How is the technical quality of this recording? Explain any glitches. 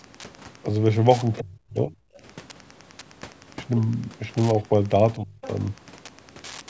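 The recording has three kinds of fault: constant radio interference and two short episodes of call echo-control trouble. The speech has passed through call microphone processing, with nothing above 8 kHz.

Wi-Fi interference runs through the whole clip. A nearby Wi-Fi radio's beacon, repeating every 102.4 ms, is being rectified by the audio circuit. This puts a steady ticking of about ten clicks per second under the speech, around 25 dB below it.

Speech suppressed in double talk occurs from 1.4 to 2.0 s and from 5.16 to 5.41 s. Most likely both parties spoke at once, and the echo canceller couldn't separate the talker from loudspeaker echo, so it turned everything down. The voice dips by roughly 30 dB in the first episode and 25 dB in the second.

The other side's voice leaks through at 2.14 to 2.2 s and 5.42 to 5.48 s, right after each suppression. The echo canceller likely left some of the far-end loudspeaker sound in the microphone signal. 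Each leak is a brief, faint scrap of a second voice, roughly 30 dB and then 20 dB below the speech.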